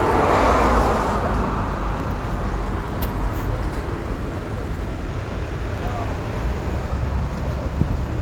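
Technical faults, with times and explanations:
No technical faults detected.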